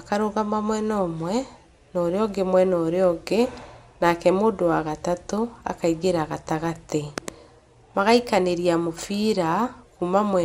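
From start to end, the speech sounds dull and gurgling, with a granular edge and nothing above 15.8 kHz. The cause is likely MP2 compression at a low bitrate around 80 kbps. A spectrogram shows a hard ceiling with upper sub-bands blinking in patchy blocks.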